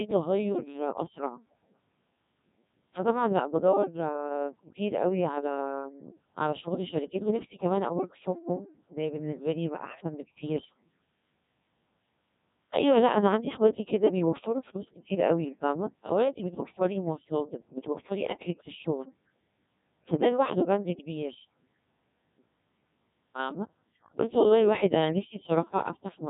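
A speech clip carried through the Codec 2 vocoder at 1.6 kbit/s for its whole length. Only pitch, voicing, level and spectral shape survive, so the voice is rebuilt from sine waves and sounds heavily robotic and buzzy. From 16.56 to 16.79 s, bit errors on digital voice radio strike. A few percent of bits flip, and the voice jumps in pitch, level and tone. It briefly breaks into warbling, bleeping gibberish.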